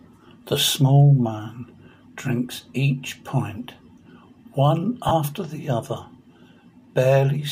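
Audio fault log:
5.08–5.11 s, lost LE Audio frames: about 30 ms of the stream goes missing, which fits three 10 ms LC3 frames. The decoder fills the gap by repeating the last spectrum with randomised signs, so the sound briefly turns into a rough, noisy smear.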